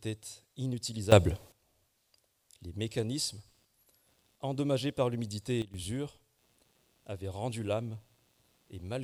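At 1.12 s the digital gain was likely switched without a ramp, a sudden gain jump of about 14 dB. The sound and its background noise leap up together in a single step and stay raised until 1.52 s.

From 2.82 s to the end, computer activity noise appears: processor or peripheral load is disturbing the shared ground of the audio circuit. It comes through as a chirping, scratchy buzz pulsing at around 150 times a second, roughly 40 dB below the sound, and it rises and falls with the machine's activity rather than with the audio.

At 5.62 s a second sudden gain jump, likely another unramped gain change, drops the level by about 12 dB. Sound and noise fall together abruptly until 5.74 s.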